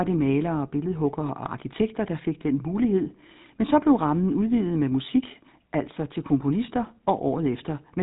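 From start to finish the speech carries GSM full-rate codec damage, and it is plainly audible. The codec rebuilds the voice from a vocal-tract model excited by evenly spaced pulses, so the result has a buzzy, gravelly texture and nothing above 4 kHz, which fits the old 13 kbps GSM full-rate coder. A simple 4 kHz low-pass would only dull the sound. Here the roughness sits inside the voice itself, harshest on higher pitches.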